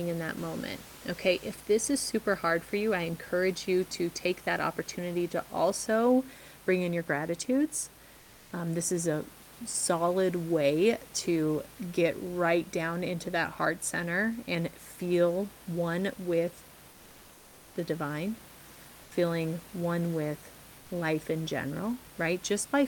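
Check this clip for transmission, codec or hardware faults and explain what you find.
Two brief patches of comfort noise in place of the background occur late in the clip, at 19.03–19.11 s (80 ms) and 20.79–20.89 s (100 ms). The room noise, about 25 dB below the speech, briefly turns smooth and steady, dropping about 2 dB and then about 1 dB. This likely comes from discontinuous transmission, consistent with Opus DTX: the sender pauses during silence and the receiver fills the gap with synthetic noise. On a spectrogram, the textured background becomes a flat, uniform band, and the waveform's noise floor dips slightly.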